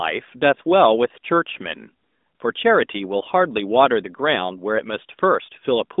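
Nothing stood out on listening to this speech clip.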